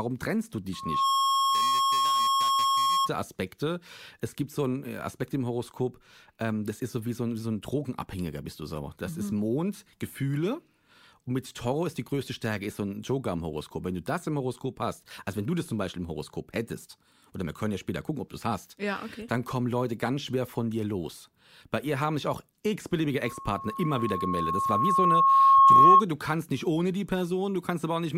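Loudspeaker feedback squeal runs from 0.73 to 3.10 s, after "trennst du." The microphone hears its own speaker, and a 1.1 kHz tone swells quickly. It returns from 23.23 to 26.02 s, before "du kannst nicht ohne," building slowly to about 15 dB above the speech.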